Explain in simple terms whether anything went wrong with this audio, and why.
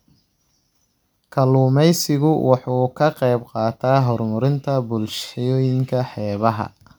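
Nothing went wrong: the speech runs without any dropouts, clicks, distortion or glitches at any point.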